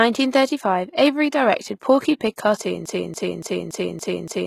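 From the start, the speech has been squeezed through a low-bitrate codec, likely HE-AAC, at a level that fits roughly 20 kbps. Only the lower spectrum is truly coded, and the treble is rebuilt by copying lower bands upward under a coarse envelope, so the top end sounds false. Sibilants turn gritty and metallic, and nothing is present above 14.9 kHz. The HE-AAC compression damage is plainly audible throughout.

At 2.86 s, the playback chain stalls, likely in the player, encoder or stream, and keeps resending the last fragment it held. This produces a broken-record loop: a 0.28 s piece repeats exactly, back to back, six times, until the clip ends at 4.47 s. The audio that should have followed in that stretch never arrives and is simply lost.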